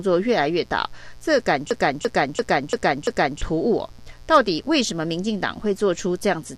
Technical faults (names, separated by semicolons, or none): mains buzz; system hang loop